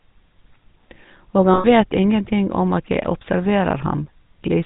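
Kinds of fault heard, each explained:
GSM full-rate codec: Throughout, the speech carries a plainly audible buzzy, gravelly roughness, which fits a 13 kbit/s full-rate coder. This codec represents the vocal tract as a filter and excites it with a sparse train of regularly spaced pulses, discarding two of every three excitation samples. That coarse excitation produces the grit heard here, and nothing above 4 kHz survives, so the speech sounds dull and band-limited.
lost GSM frames: From 1.54 to 1.65 s the speech stops evolving and is held as a rough, metallic ring. When frames are missing, the decoder reuses the parameters of the last good frame and repeats them at a decreasing level rather than inserting silence. The gap of roughly 100 ms points to about five 20 ms frames. It is too brief for the repetition to fade all the way out.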